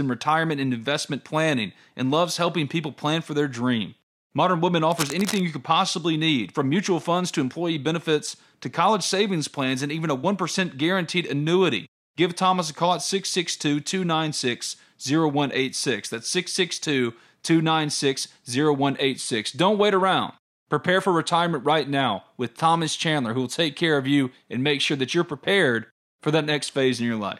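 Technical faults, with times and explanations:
4.9–5.4 s, cable scratch noise: a dense, ragged scratching sits not far below the speech just before "you could possibly need", likely from a worn connector's contact resistance fluctuating.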